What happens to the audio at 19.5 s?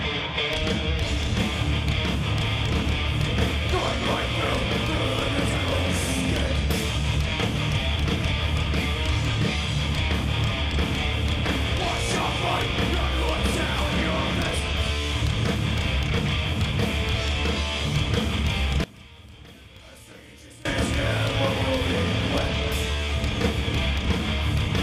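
From 18.84 to 20.65 s the sound drops by about 21 dB, likely from one channel inverted so the shared content cancels in mono. The waveform shrinks sharply there, and the spectrogram dims across all frequencies.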